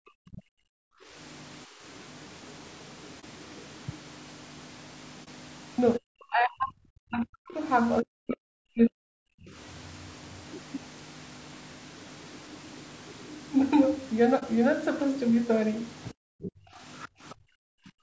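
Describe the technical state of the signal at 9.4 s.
At 9.4 s the speech sits near the end of a double-talk suppression span from 5.98 to 9.53 s: the echo canceller likely could not separate the talker from the loudspeaker echo and turned both down, pushing the talker down by as much as about 40 dB.

Throughout the clip, including this moment, low-delay AAC compression, likely AAC-ELD at 32 kbps, makes the speech rough and grainy. The spectrogram shows harmonics with noise filling the gaps between them, below the call processing's 8 kHz ceiling.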